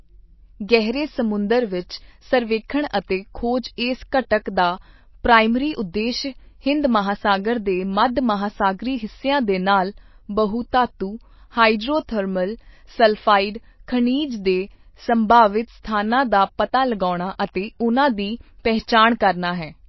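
Speech, dull and watery all the way through with nothing above 5.8 kHz, likely MP3 compression at a starved bitrate, which fits roughly 24 kbps.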